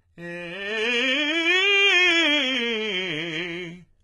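From start to finish the music carries heavy HE-AAC compression damage, likely from encoding at a very low bitrate on the order of 16 kbps. The lower spectrum is coded thinly, while the treble up to a hard ceiling near 11.7 kHz is synthesized by copying lower bands upward, so it sounds bright but gritty and metallic, its harmonics not lining up with those below. A plain low-pass filter would sound dull rather than falsely bright, and ordinary MP3 smearing lacks this grainy, replicated top end.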